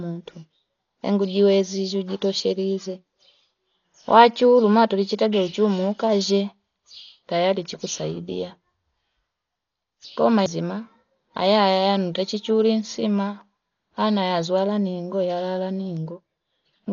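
Speech, and it's dull the whole way through, with nothing above about 6.9 kHz and a rough, fluttery hiss hanging around the voiced sounds. That's likely Dolby Digital compression pushed hard, at a rate that points to roughly 40 kbps, where the encoder narrows the band and the decoder fills the emptied bands with noise.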